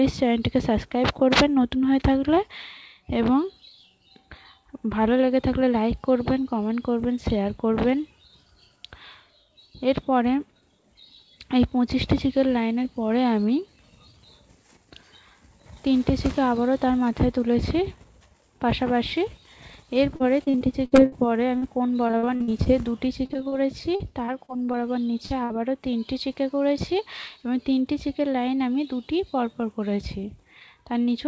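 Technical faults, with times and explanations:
20.16–25.52 s, repeated packet loss (robotic sound): choppy, robotic stretch with pieces missing, as over twenty short holes, the longest about 61 ms, are each patched by stretching the preceding sound before the next drop arrives. The call path's band stops at 8 kHz.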